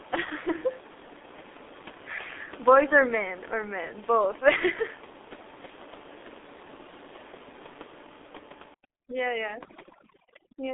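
A G.723.1 codec runs through the whole speech clip, and its heavy coding damage fits a very low rate of about 6 kbit/s. Nothing passes above 3.8 kHz, the line band sits between 250 Hz and 3.6 kHz, and its slowly updated voice model leaves the speech muffled and hoarse with smeared consonants. From 8.74 s to the end at 10.73 s, overdone noise removal cuts frequency bands that fall near the noise estimate. The room noise, about 15 dB below the speech, drops and breaks up into twinkling specks, while quieter parts of the voice are stripped away.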